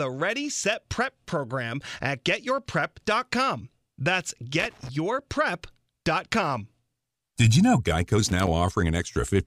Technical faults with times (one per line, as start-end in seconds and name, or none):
4.59-4.89 loose connector crackle
8.29-8.47 loose connector crackle